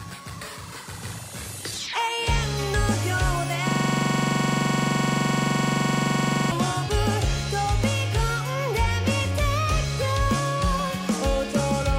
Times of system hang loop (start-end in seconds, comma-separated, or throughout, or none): 3.69-6.51